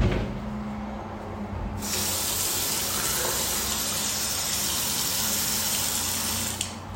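Nothing stood out on listening to this audio.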